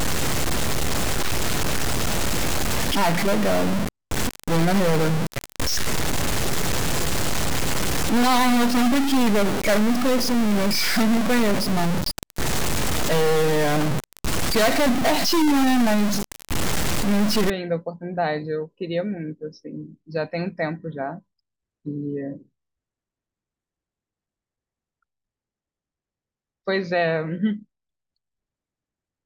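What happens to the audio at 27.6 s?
Nothing goes wrong at 27.6 s; the speech carries on intact through that moment with no fault to be heard.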